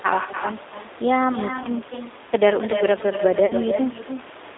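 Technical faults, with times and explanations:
Throughout, echo with no canceller: every phrase is shadowed roughly a third of a second later by a quieter copy, about 9 dB down, sounding thinner than the direct speech. The far end's loudspeaker feeds its microphone and nothing subtracts that path, so the talker's own sound returns after the network round trip. On a spectrogram each syllable's harmonic pattern reappears faintly, displaced to the right by a fixed gap, like a pale ghost track.
Throughout, G.729 codec: the speech has the slightly rough, synthetic grain of an 8 kbit/s codec, plainly audible here, and the band is confined to about 300 Hz to 3.7 kHz. The decoder rebuilds each 10 ms frame from a vocal-tract filter, a pitch predictor and a handful of pulses rather than the true waveform, so fine detail is lost. A spectrogram shows a hard ceiling near 3.7 kHz with empty space above, and smeared, blocky harmonics below. 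The room noise sits about 21 dB under the speech and takes on the same coded texture.
1.63 to 1.68 s and 3.46 to 3.53 s, VoIP packet loss concealed by the speech codec: 20 ms of audio goes missing at the first point and 40 ms at the second. The decoder fills each gap by extending the last pitch and filter with falling gain, and the sound briefly stretches into a fading artificial tail. Each frame depends on the one before, so the speech stays weak for a short while after packets resume. A waveform shows a repetitive, shrinking stretch. A spectrogram shows frozen horizontal harmonics in place of normal movement.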